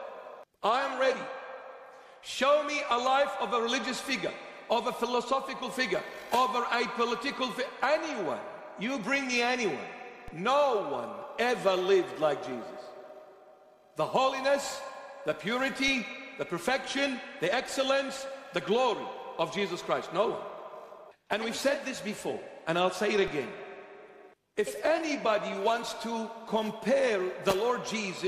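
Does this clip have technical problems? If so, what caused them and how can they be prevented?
Yes: three DC steps, at 10.28, 15.88 and 23.28 s. The zero line jumps by about -31 dBFS, then bleeds away through a roughly 20 Hz high-pass, giving low thumps. Prevent it with stable converter calibration and DC-blocked inputs.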